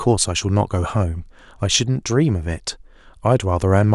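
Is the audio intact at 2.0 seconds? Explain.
Yes, the audio is intact at 2.0 seconds, with no fault present at that moment.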